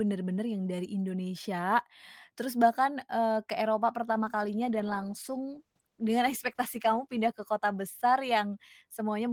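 From 4.09 s to 8.59 s the speech goes through a call bitrate drop. The connection's bandwidth estimate fell and the encoder was forced to spend far fewer bits, which fits a fall from around 32 kbps to around 13 kbps, with the lowest rate held for about 2.9 s. The speech turns coarse and watery, and the top end goes dull. On a spectrogram the upper band thins or cuts off sharply, while the waveform envelope barely changes.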